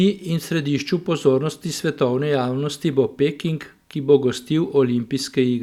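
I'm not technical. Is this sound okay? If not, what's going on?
Yes, nothing stood out as wrong when listening to this recording of speech.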